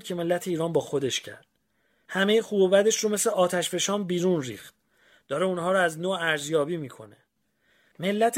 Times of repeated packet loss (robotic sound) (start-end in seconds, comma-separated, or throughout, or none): none